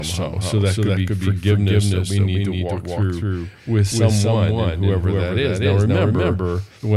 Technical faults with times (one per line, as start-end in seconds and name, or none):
0.00-6.97 doubled audio track